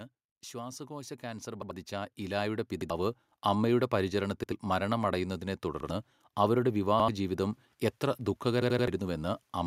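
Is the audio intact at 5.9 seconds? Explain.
No. A repeated buffer runs from 5.80 to 5.89 s: fresh audio arrived late, so the device played its last 85 ms piece of speech once more, which fits a 4096-sample buffer. It sounds like a short stutter with a hard join, and roughly a tenth of a second of real audio is lost.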